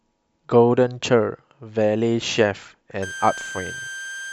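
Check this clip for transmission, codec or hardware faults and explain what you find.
One hardware fault is present. A switching supply whistle runs from 3.02 s to the end of the clip: a power supply's converter cycling at an audible rate leaks into the signal path as a high tone drifting between about 1.56 and 1.6 kHz, roughly 15 dB below the speech.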